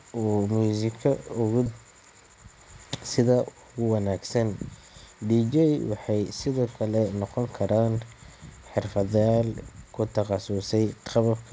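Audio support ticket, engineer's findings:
Skip ahead at 1.66–1.68 s, right after "uu muusigga ugu". Roughly 0.7 s of speech missing, no fill. Sides spliced nearly directly. Probable component: jitter buffer overflow discarding queued audio, or loss in transit. Delay drops by about the same amount.

Jitter buffer speed-up from 1.78 s to 3.76 s, ending before "ugu wanaagsan". Speech runs at 115% speed with pitch unchanged and sounds hurried. Roughly 0.3 s removed in repeated pitch-period cuts. Buffer draining excess delay. Band limit at 8 kHz fits a G.722 call path.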